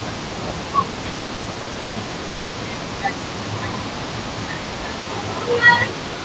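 From the first moment to the very end, a faint delayed copy of the talker trails behind the main sound, roughly 0.28 s late and about 15 dB quieter. This is an echo leak. The far end likely had its loudspeaker on, and its echo canceller did not fully remove what its microphone picked back up, so a weakened, delayed version was returned into the call.

Between 0.57 and 5.12 s the talker's level sags repeatedly, dipping by around 10 dB at worst, for about two seconds in total spread across that span. The same dip returns from 5.75 s to the end. This is speech suppressed in double talk. It likely happened because both sides spoke at once and the echo canceller, unable to tell the local talker from the loudspeaker echo, turned everything down together.

From 1.12 to 1.98 s the sound drags and stutters through eleven short hitches. The longest is 140 ms, and 360 ms of stretched filler adds up to 42% of that stretch. 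These are repeated stalls (stutter). Packets arrived late or too slowly, the jitter buffer kept running dry, and each time the receiver extended the last sound until data caught up, so nothing is lost but the flow is broken.

At 2.28 s the sound hangs for 0.26 s as a held, fading sound, with no silence, and then resumes where it stopped. This is a call audio freeze. Packets were likely held up in transit, emptying the jitter buffer, and the receiver filled the wait by continuing the last sound. The result inserts a 260 ms pause without dropping any audio.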